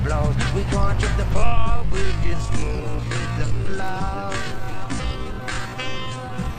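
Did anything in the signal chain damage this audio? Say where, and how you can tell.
Yes. From 1.32 s onward the pace suddenly halves (0.53x) at unchanged pitch: likely a time-stretched section, repeating short pieces.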